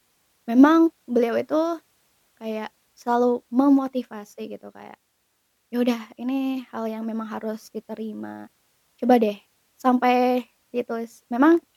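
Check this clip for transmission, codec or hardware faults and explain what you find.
No fault found; nothing audible in the speech needs flagging.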